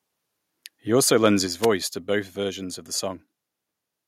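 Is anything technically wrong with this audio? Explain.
Yes, there are two faults in this speech clip.

At 1.47 s the microphone volume steps down by about 3 dB in a single jump. This is likely call software lowering the input gain after judging the level too hot. Voice and background drop together, and the waveform envelope shrinks abruptly at that point.

From 1.62 to 1.67 s there is a wireless microphone noise hit. The analogue FM radio link fades as reflections cancel, so receiver hiss surges briefly. It is heard as a short swish of static and shows as a broadband vertical smear on a spectrogram.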